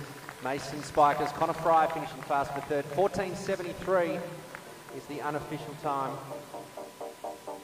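Nothing in the audio stood out as a technical fault on listening.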